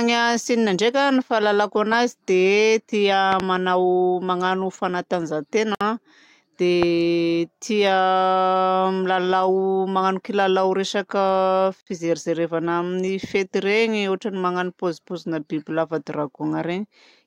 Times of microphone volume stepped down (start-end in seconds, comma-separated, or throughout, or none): none